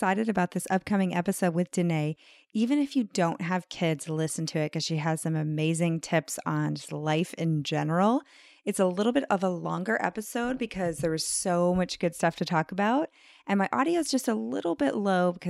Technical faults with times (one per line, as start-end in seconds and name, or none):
none